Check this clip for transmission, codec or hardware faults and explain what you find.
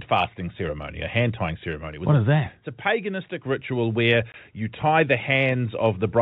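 One transmission fault is audible in the speech. From 4.32 to 4.34 s, between "a paganistic ritual where" and "you tie the", there is packet loss filled with silence. A single 20 ms block of audio never arrived, and the receiver put silence in its place, so the sound stops dead for that instant with hard edges. What sets it apart from a concealed loss is that nothing in the gap is smeared, faded or repeated. The narrow band, with nothing above 4 kHz, comes from G.711 telephone coding, which fits a 64 kbps A-law link.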